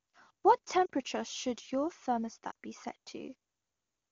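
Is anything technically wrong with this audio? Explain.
Yes. Lost AMR speech frames at 0.86 to 0.90 s and 2.51 to 2.55 s, each gap 40 ms, fitting two 20 ms frames. The wideband decoder repeats the last good pitch and vocal tract settings at falling gain, so the speech briefly drops to near silence, then returns weak or rough for a moment.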